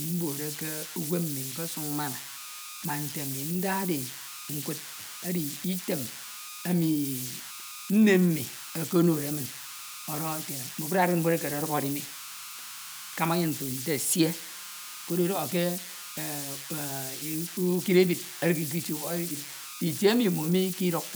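Converter idle tones run through the whole of the speech, from start to finish. The delta-sigma converter is working without dither, so when the input is small its modulator settles into repeating bit patterns, and these produce tones whose pitch is set by the signal's offset. Here the tone sits around 1.5 kHz, heard as a whistle in the pauses and as grainy noise beneath quieter passages, with the error standing at about -10 dB relative to the signal.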